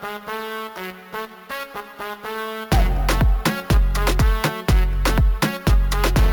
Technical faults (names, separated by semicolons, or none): imaging from sample-and-hold upsampling